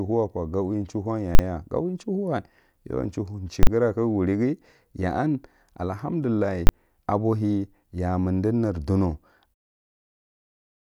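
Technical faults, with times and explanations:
1.35–1.39 s, 3.63–3.67 s and 6.67–6.69 s: invalid numbers at full scale. A calculation produced infinite or invalid values, which were clamped to the largest sample value. The speech is replaced by a hard loud bang each time. The first two blocks last 40 ms and the last lasts 20 ms.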